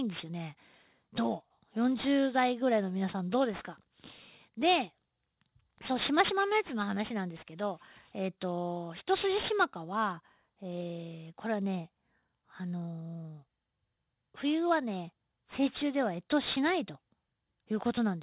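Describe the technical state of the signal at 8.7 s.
At 8.7 s, as throughout the clip, aliasing is present: content above 4 kHz folds back, consistent with an unfiltered 8 kHz resample, leaving gritty, metallic sibilants about 15 dB below the speech.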